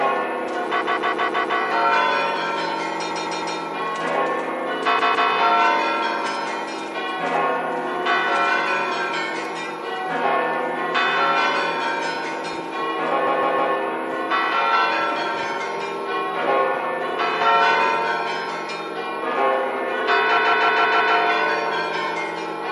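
Throughout this sound clip the treble is cut off and there is a watery, swirling texture with smeared attacks, plainly audible MP3 compression, likely from encoding at a low bitrate around 64 kbps. Unlike simple low-pass filtering, the remaining high band flickers from moment to moment. Separately, repeated frames make the same 0.16 s slice play back-to-back like a stutter: five extra plays at 0.80 to 1.58 s, three at 3.10 to 3.57 s, two at 4.98 to 5.29 s, three at 13.26 to 13.73 s and five at 20.37 to 21.15 s. The block length fits six MP3 frames resent. Unlike a dropout, nothing goes missing. Identical material loops and the clip grows longer.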